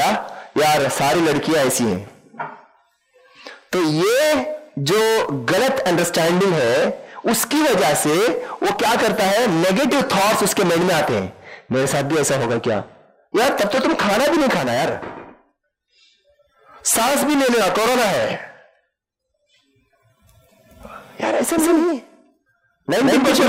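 A doubled audio track appears at 21.58 s and runs to the end of the clip. From that point a second, full-band copy of the sound plays roughly 150 ms behind the first, at about the same level, so every onset is heard twice in quick succession. The copy cuts in abruptly and carries no decay or room colour, which likely points to the signal being captured again by a slower parallel path.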